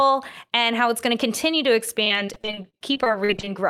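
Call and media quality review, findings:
Repeated packet loss (robotic sound), 2.03 to 3.48 s, near the end of the speech. Choppy, robotic patch with a rapid run of short dropouts, the longest about 40 ms. Probable jitter buffer or network path. Each hole gets papered over by stretching the last bit of audio, so roughly a quarter of that stretch is concealment rather than real signal, which gives it that robotic texture.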